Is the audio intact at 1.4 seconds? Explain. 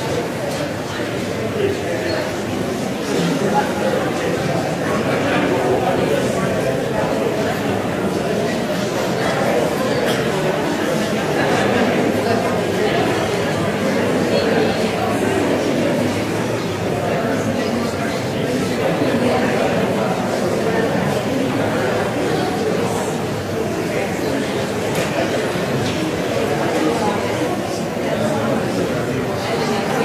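Yes, the audio is intact at 1.4 seconds, with no dropout, click, distortion or other fault at that moment.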